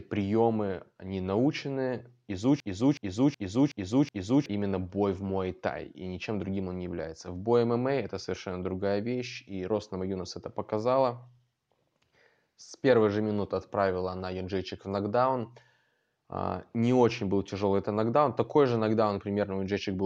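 At 2.60 s, after "приемы они научены", a system hang loop begins. The computer or driver froze while the hardware kept cycling its buffer, so a 371.5 ms slice, fitting a 16384-sample buffer, stutters five times at 2.69 Hz until 4.46 s. About two seconds are lost before "бой в".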